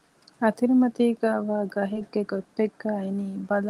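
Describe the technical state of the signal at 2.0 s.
Short concealed packet loss from 1.93 to 1.97 s: about 20 ms of speech never arrived, and the receiver extended the preceding sound before blending back, heard as a brief smear. A spectrogram shows the preceding sound smoothly continued and blurred there.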